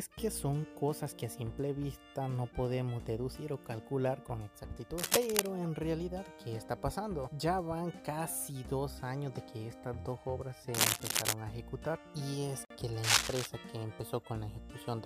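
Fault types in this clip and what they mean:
Cable scratch noise: at 4.98 to 5.47 s, 10.74 to 11.33 s and 13.03 to 13.47 s, dense rustling bursts sit slightly above the sound, likely from a worn, moving contact.
Gap at a join of encoded pieces: at 12.65 s, a 53 ms gap opens in the sound, where encoder delay and padding stayed between separately encoded pieces.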